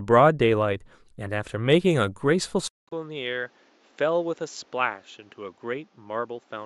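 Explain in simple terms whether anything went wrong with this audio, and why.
Two things go wrong in this speech recording, both from about the 2.7-second mark onward.

At 2.68 s the sound cuts out for about 0.2 seconds, then comes back duller, noticeably quieter, and with a faint new background hiss that wasn't there before. This stays until the end of the clip. It sounds like an input switched to a poorer device: the recording most likely jumped from one microphone to a lower-quality one partway through. The new input passes nothing above about 7.6 kHz, so the crisp top end of the voice is gone.

Between 2.90 and 2.93 s, just after that switch, there is a short glitch. This is a corrupt frame decoded: one small packet of the compressed audio was damaged, but the player decoded it anyway. The garbled data put sound at the wrong pitches for that single frame, which lasts only about three hundredths of a second, so it comes across as a brief unnatural glitch rather than a lasting problem.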